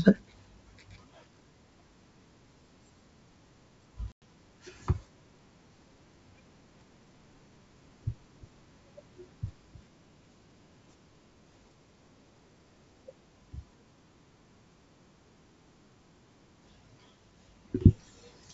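At 4.12 to 4.22 s there's packet loss on the G.722 ADPCM call: a hard-edged 100 ms silent hole, then a brief settling as the decoder's predictor and step size catch up.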